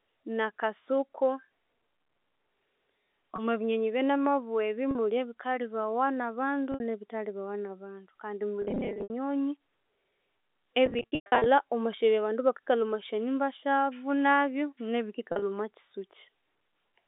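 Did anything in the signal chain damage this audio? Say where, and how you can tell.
Yes, at the network stage: packet loss with pitch repetition, heard at 3.36–3.38, 4.91–4.95, 6.72–6.80, 8.62–9.10, 10.86–11.46 and 15.32–15.42 s. The receiver bridges each gap by looping the last pitch period, so the short losses (20 and 40 ms) sound like a briefly held buzz. The scattered bursts at 8.62 and 10.86 s lose 280 and 370 ms, with runs up to 110 ms long enough to fade toward silence. The gap sizes fit 10 ms packets. On a spectrogram these stretches show frozen, perfectly periodic harmonic stripes decaying over roughly 50 ms. On the waveform they appear as identical repeated cycles. The G.711 narrowband coding, cut off near 3.6 kHz, does not cause these dropouts.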